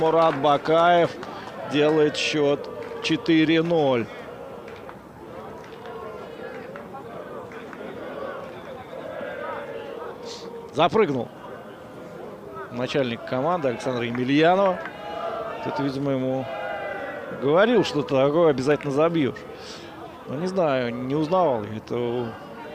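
No technical faults can be heard in this audio.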